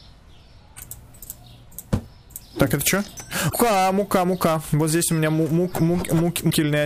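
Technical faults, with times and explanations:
3.46–3.54 s and 6.47–6.53 s: damaged data in a compressed stream. For roughly 80 ms and then about 65 ms, the decoder hits corrupted bytes, misreads or drops those frames, and hunts for the next valid frame header. The result is a brief chirp, squawk, click or short hole that breaks the sound. On a spectrogram each appears as a narrow vertical block of disturbed energy or a gap with hard edges. The waveform shows an abrupt discontinuity at both boundaries.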